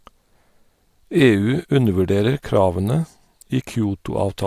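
No technical faults occur in this speech clip, so there is nothing to describe in time order.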